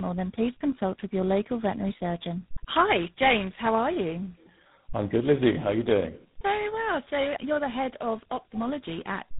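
Throughout, tandem speech coding: three speech codecs re-encoded each other's output, fitting a chain ending in GSM full rate, leaving rough, warbly, muffled speech with nothing above 3.9 kHz.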